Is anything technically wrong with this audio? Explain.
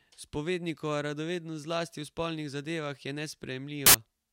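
Yes, there's one problem. From 3.86 to 3.94 s the speech turns into a blast of loud, harsh broadband noise: samples built from the wrong bytes. The reader misassembles each sample's bytes, so the jittery low bits end up driving the value, and you get hiss instead of speech.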